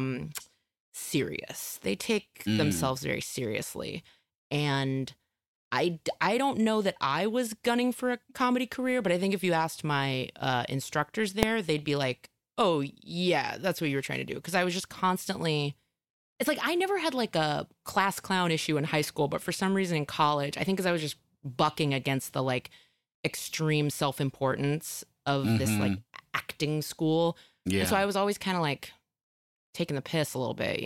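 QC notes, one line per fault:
11.43 s: invalid numbers at full scale. A calculation produced infinite or invalid values that pinned the output to full scale for about 0.73 ms, which fits a 32-sample processing block, heard as one sharp bang in the speech. The waveform shows a brief flat run at one extreme value, well beyond the speech peaks; the spectrogram shows a thin vertical broadband stripe.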